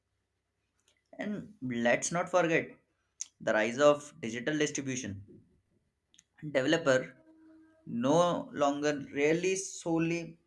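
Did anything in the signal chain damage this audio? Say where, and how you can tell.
No, no stage of the signal chain audibly damaged this audio.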